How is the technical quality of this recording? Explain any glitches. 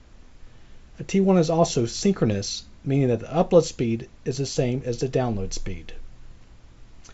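The technical quality of the recording is sound, with no glitches to explain.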